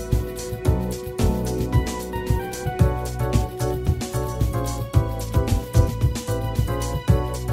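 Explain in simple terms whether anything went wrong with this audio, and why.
Nothing went wrong here.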